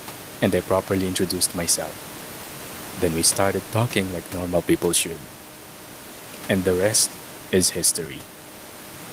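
Nothing in the signal chain of this speech recording is at fault, and the only sound beneath the speech is the room's own background noise, sitting about 19 dB below it.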